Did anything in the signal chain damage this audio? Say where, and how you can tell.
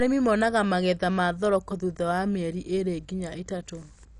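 Yes, at the codec stage: the speech shows MP2 compression throughout, likely from a starved encode that fits about 48 kbps. Upper sub-bands are switched off and the remainder coarsely quantised, so a spectrogram shows a hard ceiling at 11.3 kHz with flickering bands, heard as dull, gurgling graininess.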